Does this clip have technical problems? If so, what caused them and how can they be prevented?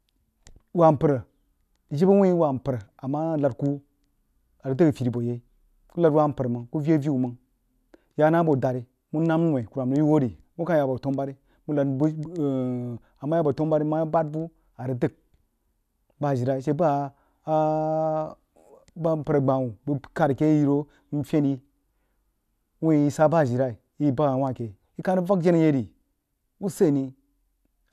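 No, there are no technical faults in this speech clip. Since nothing went wrong, there is nothing here that needs preventing.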